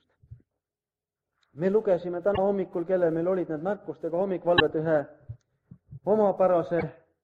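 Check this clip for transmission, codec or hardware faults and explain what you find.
The clip has one kind of fault, damaged data in a compressed stream, which occurs three times: from 2.34 to 2.38 s, from 4.56 to 4.61 s and from 6.78 to 6.83 s. Each burst lasts roughly 40 to 55 ms. Corrupted bytes in the coded stream make the decoder misread those frames and lose sync until it finds the next valid frame header. The result is a brief chirp, squawk, click or short hole in the audio.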